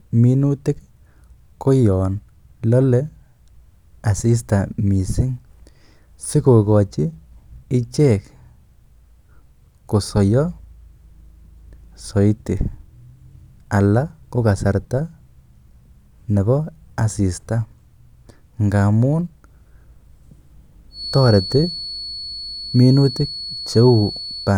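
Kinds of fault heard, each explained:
Feedback whistle: a thin, single-pitch 4.4 kHz tone that slowly swells and fades sits about 15 dB under the speech from 20.89 s to the end, likely from a loudspeaker-to-microphone loop held at the brink of feedback; a spectrogram shows one narrow horizontal line, while the waveform barely changes.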